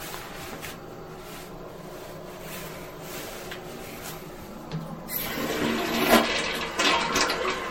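From start to finish the sound is swirly, smeared and hollow, with blurred attacks and nothing above 16.5 kHz. That points to generation loss, likely from around five passes through a lossy MP3 encoder near 60 kbit/s, each pass piling on fresh artefacts.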